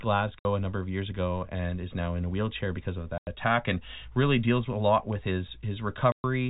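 Speech, heard through a narrowband telephone-style channel, cuts out in abrupt silent holes at 0.39 s (before "a number of years"), 3.18 s (after "a wheelchair because of") and 6.12 s, lasting 60, 90 and 120 ms. This is packet loss filled with silence, with gap lengths that fit 30 ms packets.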